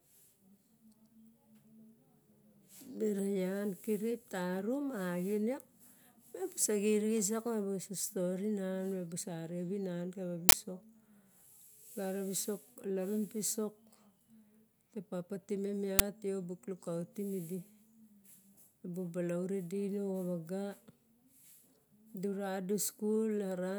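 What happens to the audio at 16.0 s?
At 16.0 s the speech is interrupted by an uninitialised buffer: a single 10 ms block goes to the output before any audio has been written into it. Whatever data was left in that memory gets played as if it were samples, so the listener hears a brief, loud crack that bears no relation to the surrounding speech. The block length fits one buffer being released early.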